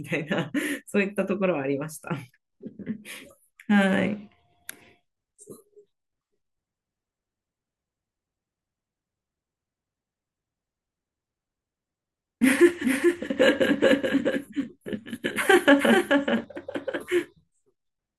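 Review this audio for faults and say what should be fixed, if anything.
From 12.84 to 16.44 s there's a doubled audio track: the speech suddenly picks up a second copy of itself trailing around 400 ms behind and a few dB quieter, roughly 5 dB down. It's a clean, full-band repeat with no reverb tail or room sound, and it switches on and off abruptly at those edges. That points to the likely cause being the same source captured twice, once through a slower path, or an edit that left two misaligned copies stacked. To prevent it, make sure each source reaches the mix by a single route and check edits for leftover overlapping duplicates before bouncing.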